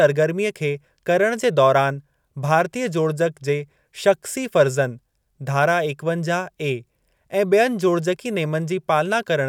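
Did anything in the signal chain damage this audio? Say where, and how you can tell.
No, nothing in the signal chain damaged this audio. Listening through the speech, I hear nothing that points to a problem at any stage from capture to playback.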